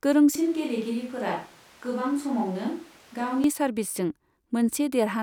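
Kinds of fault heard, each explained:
Switch to a distant microphone: from 0.35 to 3.44 s the speech abruptly turns roomy and hollow and about 5 dB quieter, likely a far microphone replacing the close one; the waveform shrinks and the spectrogram shows weaker lows over a raised noise floor.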